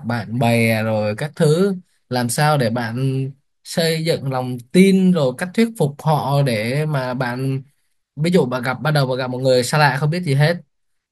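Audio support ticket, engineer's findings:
Nothing stood out on listening to the speech in this clip.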